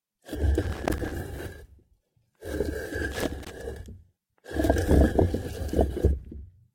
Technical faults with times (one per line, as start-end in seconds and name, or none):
0.62-1.12 loose connector crackle
3.12-3.50 loose connector crackle